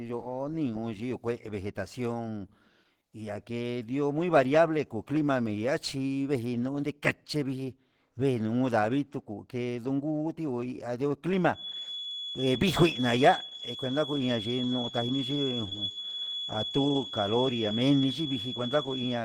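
Throughout the speech there is a rough, grainy, hoarse texture with plainly audible codec damage. The likely cause is Opus compression in its hybrid speech mode, at a rate pointing to about 16 kbps. Unlike MP3, it fills bands with noise instead of leaving swirling spectral holes, and the bandwidth stays full.

From 11.51 s to the end, a thin, steady feedback whistle at 3.4 kHz sits roughly 10 dB under the speech, swelling and fading slowly in level. A loudspeaker-to-microphone loop held just short of runaway is the likely cause. Unlike electrical interference, it never stays perfectly constant.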